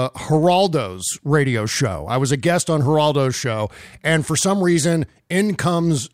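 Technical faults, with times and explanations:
0.43 s and 2.49 s (after "show i was a"), bit error spike: a flipped bit throws single samples to about -22 and -28 dBFS, giving sharp ticks seen as one-sample waveform needles and thin full-band spectrogram lines.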